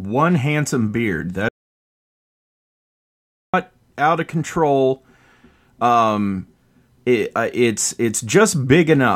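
A speech clip with an audio dropout to silence from 1.49 to 3.54 s: about 2.05 s of silence, with no room tone, unlike a natural pause, likely from lost input.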